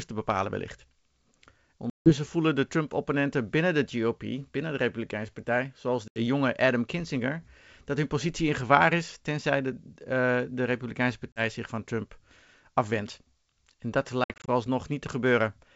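Speech over a wideband G.722 call, clean up to about 7 kHz, with packet loss on an ADPCM call: hard silent holes at 1.90–2.12 s, 6.08–6.19 s, 11.33–11.41 s, then broken gaps across 14.24–14.48 s. Each time, the decoder's predictor loses sync, so speech returns slightly distorted and briefly settles.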